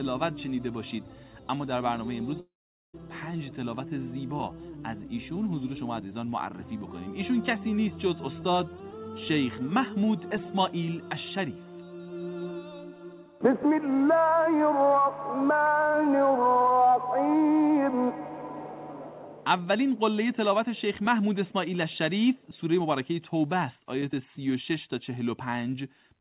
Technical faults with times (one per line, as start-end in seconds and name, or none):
2.40-2.95 long network dropout